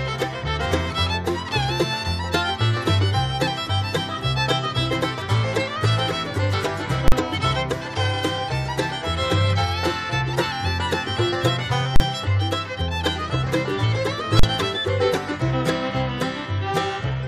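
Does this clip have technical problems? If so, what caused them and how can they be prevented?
Yes. At 7.08 to 7.12 s, 11.96 to 12.00 s and 14.39 to 14.43 s there is a very loud, sharp bang, a hard pop at the start and end of a 40 ms gap with no sound between. These are invalid numbers at full scale: a calculation produced infinite or undefined values, which were clamped to the largest sample value and held for the whole block. Prevention: check for invalid values after each processing stage and replace them with silence before output.

At 13.46 s the audio jumps forward. This is compressed frames skipped: a couple of frames, about 50 ms of audio, were never played because they were missing or rejected as damaged. The frame length is 23.2 ms. Prevention: verify file integrity and conceal lost frames rather than skipping them.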